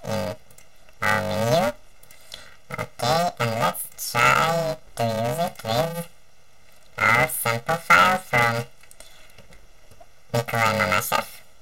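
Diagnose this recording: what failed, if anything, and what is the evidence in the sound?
Planar audio read as interleaved, throughout the recording, at the sample-format conversion stage. A robotic buzz near 345 Hz overlays the sound with no clear octave shift, which fits 128-sample blocks of about 2.9 ms, each replayed as compressed left-then-right halves.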